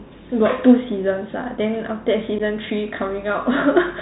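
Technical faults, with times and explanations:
Throughout, Bluetooth CVSD headset codec: one-bit slope tracking at 64 kbps cuts everything above 4 kHz, leaving scratchy s sounds, overload distortion and granular hiss.
2.39 to 2.41 s, unconcealed Bluetooth headset packet loss: about 11 ms of speech drops out, likely a few lost packets, leaving an abrupt hole, then briefly quieter speech.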